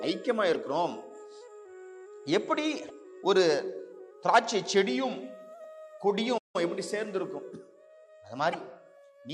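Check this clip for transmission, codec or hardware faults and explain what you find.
Two kinds of fault are present: three short bursts of damaged data in a compressed stream, and one playback stall.

The damaged data occurs at 0.51–0.55 s, 2.86–2.91 s and 8.50–8.55 s, each lasting about 40 ms. Corrupted or missing bytes in the compressed stream leave the decoder unable to parse those frames. It loses frame sync and scans forward for the next valid header. Each event is heard as a brief chirp or blip that breaks into the sound before normal decoding resumes.

The playback stall runs from 6.37 to 6.56 s. The output drops to silence for about 170 ms, cutting the sound off in mid-flow, and then playback continues. The likely cause is the player's output buffer running empty, or its audio thread being blocked, so no samples reached the device until it recovered.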